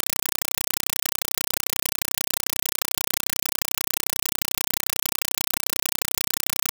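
A speech clip, but from start to finish it is a compressed stream played as audio: a Dolby Digital (AC-3) bitstream passed through as if it were PCM samples instead of being decoded. The result is very loud, chattering static in place of the speech. Each coded frame becomes a burst of noise about 5.33 ms long followed by silence, repeating 31.25 times per second. The bursts' density points to a 256 kbps stream.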